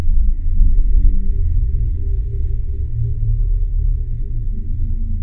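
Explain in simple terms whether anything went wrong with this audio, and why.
Wrong sample rate throughout the clip: everything plays at about 0.69 times normal speed and roughly 6.5 semitones lower in pitch. Speed and pitch drop together with no conversion, which fits a 32 kHz recording being played back at 22 kHz.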